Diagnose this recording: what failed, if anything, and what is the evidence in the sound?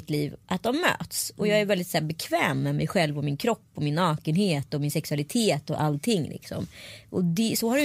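Nothing failed at any stage of this speech recording.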